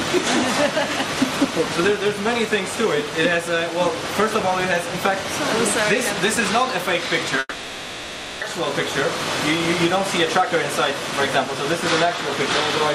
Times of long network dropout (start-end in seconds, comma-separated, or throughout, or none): 7.39-8.44